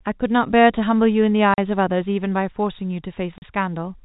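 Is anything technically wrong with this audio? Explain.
Yes, the speech cuts out twice, from 1.54 to 1.58 s and from 3.38 to 3.42 s. That's packet loss filled with silence. Each 40 ms gap, which fits two lost 20 ms packets, got swapped for dead air, so the telephone-band G.711 audio stops abruptly with a hard edge at each side.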